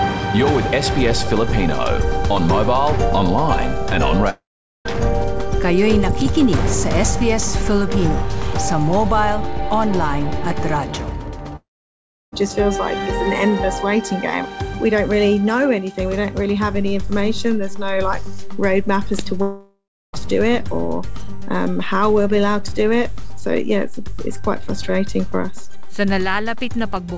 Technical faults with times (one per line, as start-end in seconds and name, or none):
4.30-4.97 long network dropout
11.56-12.34 long network dropout
16.74-26.97 DC step
19.42-20.21 long network dropout